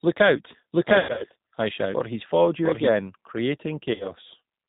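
Throughout, the speech carries the signature of the G.729 codec at 8 kbit/s: nothing above 4 kHz, and a slightly rough, synthetic texture from the filter-and-pulse reconstruction. The damage is plainly audible, with the voice thin.

From 0.72 s to 2.88 s a doubled audio track appears: a second full-band copy at roughly equal level, trailing by around 0.7 s, dry and without room colour, switching on and off abruptly. This is likely a second capture path or an edit holding two copies out of step.

Between 0.99 s and 1.25 s there is VoIP packet loss concealed by the speech codec. About 160 ms of audio is missing, scattered over 200 ms, and the longest single gap is 100 ms. The decoder extends the last pitch and filter state, so the sound is stretched out and fades, and stays weak briefly after packets return.

A second, shorter concealment event from 3.94 s to 4.13 s covers about 60 ms of lost audio. 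It produces the same brief stretched, decaying sound, and the level recovers gradually rather than snapping back.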